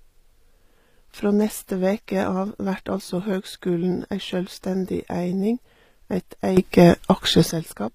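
Throughout the speech, the treble has a gritty, metallic edge, and s sounds come out lispy, with nothing above 15.5 kHz. This is likely HE-AAC compression at a low bitrate, consistent with about 24 kbps, where the upper band is rebuilt by replication from lower bands rather than coded.

At 6.57 s, right after "ei sjølvstendig eining eit", a sudden gain jump raises speech and background noise together by about 12 dB, with no ramp, until 7.51 s. A gain change applied between adjacent samples is the likely cause.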